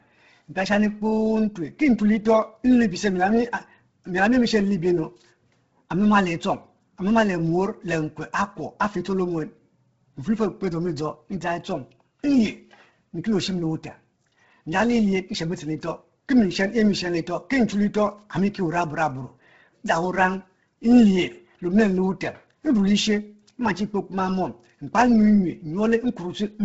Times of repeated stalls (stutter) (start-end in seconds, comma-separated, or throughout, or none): none